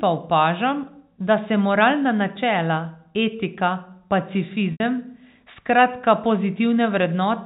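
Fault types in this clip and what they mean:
Packet loss with pitch repetition, 4.72 to 4.80 s: about 80 ms of the signal goes missing, a gap that fits a handful of consecutive lost packets. The receiver fills it by replaying the most recent pitch cycle, giving a brief held, buzzy tone that decays over roughly 50 ms. Because the loss outlasts that decay, the remainder drops to silence before the speech cross-fades back in, all over the narrow telephone band of the G.711 stream.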